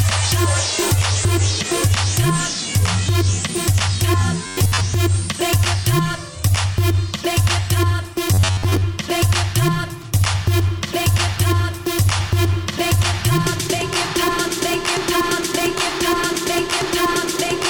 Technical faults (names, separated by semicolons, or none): robotic sound from repeated short buffers